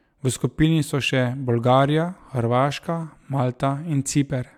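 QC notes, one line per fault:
No fault to note in this speech clip.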